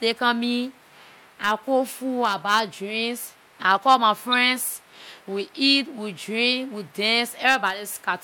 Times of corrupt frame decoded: 4.32-4.34

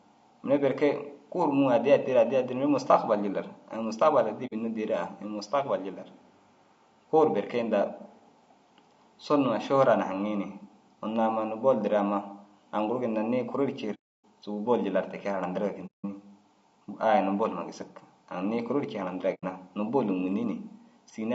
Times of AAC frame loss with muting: 4.46-4.53, 13.94-14.23, 15.86-16.05, 19.34-19.44

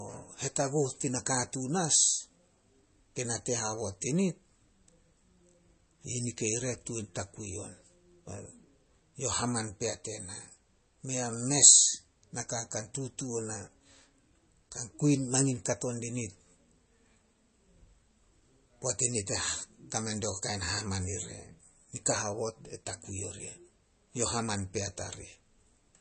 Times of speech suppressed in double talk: none

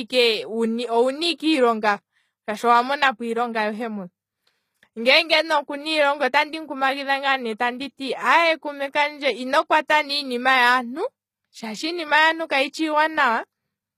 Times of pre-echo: 1.38, 9.88

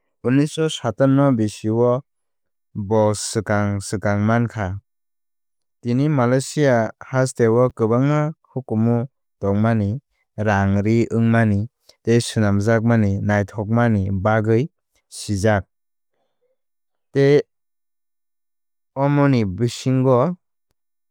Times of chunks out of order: 7.70

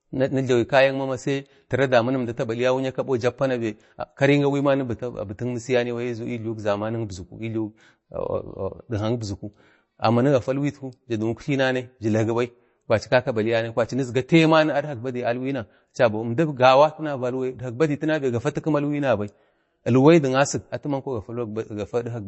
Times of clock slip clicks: none

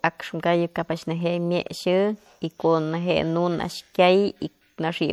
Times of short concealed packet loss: none

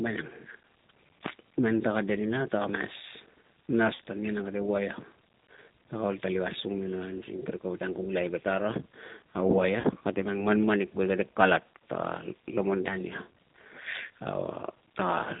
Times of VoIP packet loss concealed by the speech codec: 3.95-3.98, 9.80-9.88

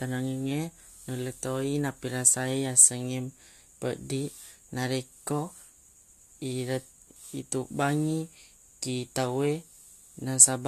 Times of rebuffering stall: none

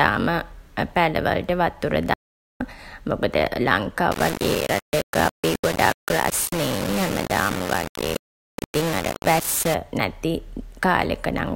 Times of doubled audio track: none

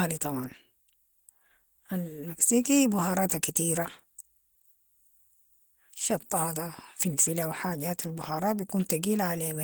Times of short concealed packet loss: none

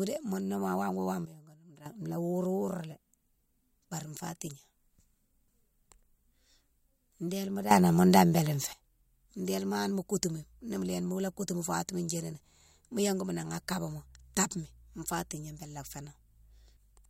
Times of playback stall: none

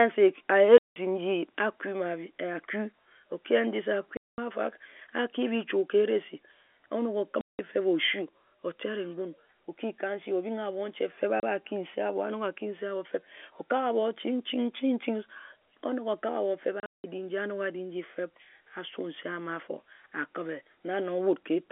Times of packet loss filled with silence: 0.78-0.96, 4.17-4.38, 7.41-7.59, 11.40-11.43, 16.80-17.04

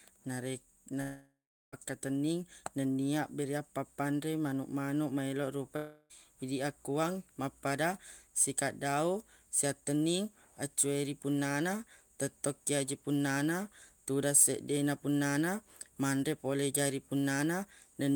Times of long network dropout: 1.01-1.74, 5.76-6.25

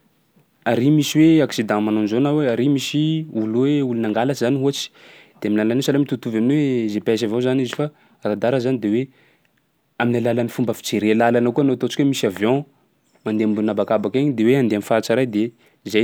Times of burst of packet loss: none

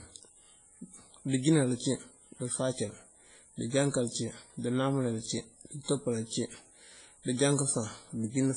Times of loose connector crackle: none

